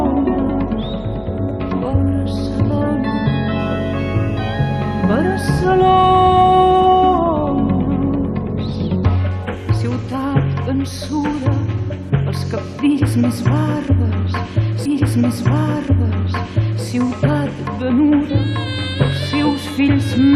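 From 3.59 to 7.18 s there's timecode bleed: a thin, steady chirping warble sitting behind the sound, roughly 30 dB down. That's linear timecode leaking over from a nearby track or cable. The code is a square wave flipping between two pitches, here around 1 and 2 kHz, and its rhythm fits 24 frames per second.

Then at 14.85 s the stream segment repeated. The player grabbed or queued the same chunk twice, so the audio jumps back with a little blip and two seconds of material play through again, finishing at 16.85 s. The clip ends up 2 s longer than it should be, and you'll catch the déjà vu as the same passage rolls by a second time.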